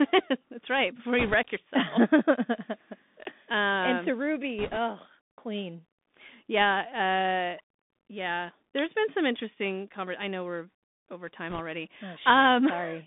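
Throughout, the speech travels through a Bluetooth CVSD headset codec, a one-bit adaptive delta coder consistent with a 64 kbps link. The band runs from about 200 Hz to 3.6 kHz, s sounds are scratchy, and a granular hiss sits underneath.

Bit errors on a Bluetooth voice link flip a few percent of the bits at 1.19–1.34 s, 4.59–4.77 s and 11.50–11.60 s. Each burst brings a brief rushing crackle without loud clicks.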